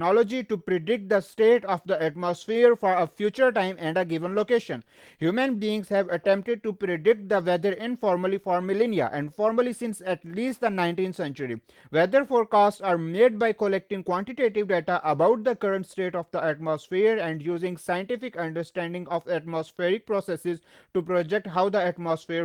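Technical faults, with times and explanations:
throughout: clock drift between sender and receiver. The sender's clock runs roughly 4% slow, so the receiver's buffer keeps draining and the timing wobbles unevenly.
0.29 to 22.36 s: repeated timing corrections. The receiver keeps repeating short pieces to stay in step, stretching playback to 96% speed, adding roughly 0.7 s, heard, if at all, as slight hiccups.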